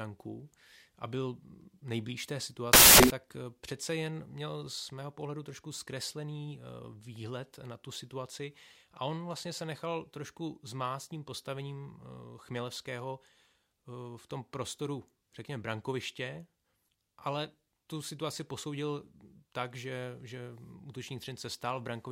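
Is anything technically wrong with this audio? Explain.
Yes. Samples built from the wrong bytes occur from 2.73 to 3.10 s, between "a byl nejblíž té" and "eh přece jen měl". For those 0.37 s the reader assembles each sample from misaligned or swapped bytes, so the rapidly changing low-order bits end up as the most significant part of every value. The speech is replaced by a burst of loud, harsh broadband noise.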